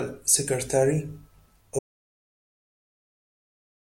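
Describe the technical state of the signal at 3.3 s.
At 3.3 s the signal is silent: an audio dropout to silence that begins at 1.79 s and runs to the end of the clip. The speech cuts off abruptly with no room tone left, likely because the input was lost while the recorder kept writing silence.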